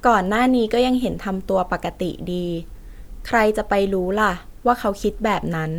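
No technical faults can be heard in this speech recording.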